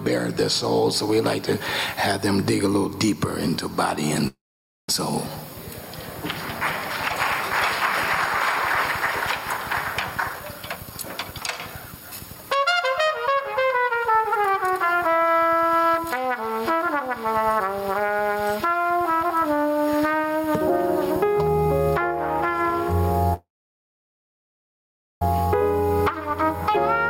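Gain pumping runs through the whole clip, with a gain swing of around 15 dB, and loud and soft passages sit closer in level than they should. This is likely from input gain set far too high and a fast limiter clamping it back down. A breathing background is what separates it from ordinary compression, which flattens dynamics without the noise floor visibly rising and falling.

At 4.27 s the sound stops and a fading continuation of its last moment trails off into roughly half a second of silence before the audio resumes at 4.89 s. This is a call audio freeze, likely a jitter buffer running dry while packets were held up. About 0.61 s is inserted and nothing is lost, which distinguishes it from a dropout: the sound picks up exactly where it stopped rather than jumping ahead.

From 10.11 s to 15.23 s the audio runs at about 112% speed with its pitch unchanged, shedding around 0.7 s in total. 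This jitter buffer speed-up comes from the receiver trimming short pitch-period slices, many in a row, to work off excess delay. The pitch is steady, which rules out a simple playback-rate error, since that would raise the pitch along with the tempo.

A second, longer call audio freeze runs from 23.34 s to 25.22 s. The last sound fades into about 1.76 s of silence, and 1.87 s in total is inserted. The audio then continues seamlessly with nothing skipped.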